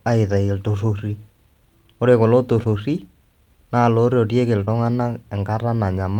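Two stretches of the speech show short concealed packet loss, where roughly 20 ms of audio failed to arrive in time and the receiver improvised a replacement. At 2.63 to 2.67 s, just after "ore kulo", and again at 4.65 to 4.69 s, the decoder extended the preceding sound across the gap and then crossfaded back into the real signal. Each spot is heard as a brief smear or wobble in the speech.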